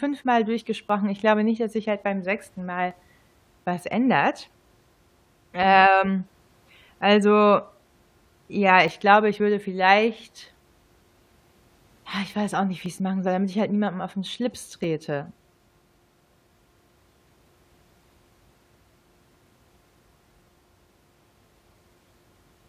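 Overlap between stream segments causes tiny skips at 0.89, 2.91, 8.88, 12.86 and 14.84 s, falling on 2-second segment boundaries. Overlapping time stamps make the player trim 7 to 18 ms of speech that was never duplicated, so the waveform jumps.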